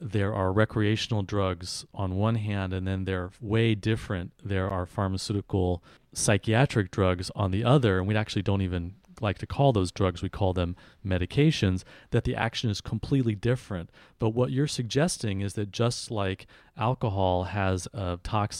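At 4.70 s, before "are pharmaceutical psychiatric drugs", a 10 ms block of digital silence (likely an unfilled buffer) ticks, flatlining the waveform with vertical spectrogram streaks.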